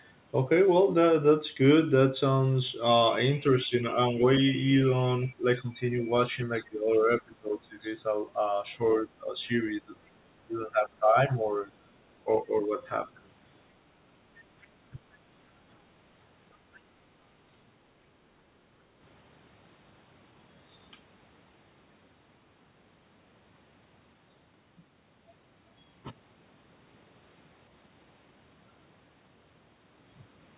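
Between 3.65 and 4.16 s, 5.28 and 7.83 s, 8.77 and 9.93 s, 10.47 and 11.31 s, and 12.24 and 12.73 s, the speech dips by roughly 5 to 20 dB, deepest around 5 to 8 s. This is speech suppressed in double talk, likely an echo canceller pulling the talker down while the far end spoke.

At 14.61 to 14.67 s a faint scrap of a second voice slips through, around 35 dB below the speech. This is the other side's voice leaking through, likely residual loudspeaker echo the canceller missed.

A further brief double-talk dip, of about 15 dB, follows at 14.91 to 15.0 s.

At 15.52 to 15.66 s the room sound drops by about 8 dB and then returns. This is background gated by the echo canceller, which clamped the microphone while the loudspeaker played.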